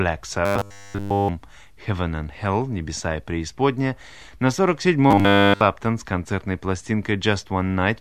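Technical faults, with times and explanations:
0.46–1.30 s and 5.11–5.61 s, robotic sound from repeated short buffers: fresh audio likely stopped arriving in time, so the playback loop kept replaying its last 10 ms chunk, and the incoming sound was skipped. Nearly all of each span is recycled material. Looping a 10 ms slice imposes a fixed 100 Hz buzz, turning the speech into a rigid, metallic drone that only loosely traces its shape. The second span ends just before "с концертной".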